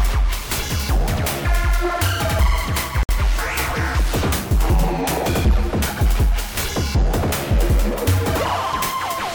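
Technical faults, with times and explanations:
3.03–3.09 s: gap at a join of encoded pieces. A 59 ms silence cuts into continuous sound with smeared edges, from encoder start delay and last-frame padding left untrimmed.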